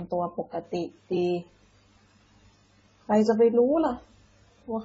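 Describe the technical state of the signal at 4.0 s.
At 4.0 s, as through the whole clip, the speech has nothing above 7.6 kHz and carries two overlaid sets of coding artefacts, most likely from transcoding between lossy codecs. The mix fits a low-rate AAC pass re-encoded as low-rate MP3, with the later encoder spending bits on the earlier smearing. That layered texture sets it apart from a single low-bitrate encode.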